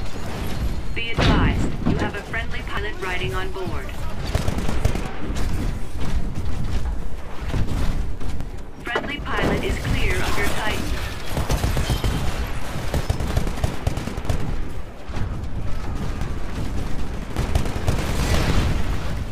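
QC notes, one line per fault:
2.77 to 18.35 s, dropped buffer (overrun): a sudden jump ahead at 2.77, 5.42, 8.41, 14.25, 16.21, 17.37 and 18.35 s. About a tenth of a second goes missing at 2.77 and 17.37, more at 16.21, and a few hundredths elsewhere. No gap, just a hard splice, likely from capture not emptying its buffers in time.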